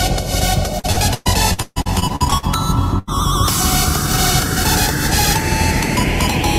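From 0.79 to 2.45 s, repeated packet loss leaves about a dozen concealed gaps, the longest 137 ms, making the sound choppy and robotic with pieces missing. At 2.99 to 3.09 s, a burst of packet loss drops about 80 ms; the last sound is held and faded before the audio resumes further on.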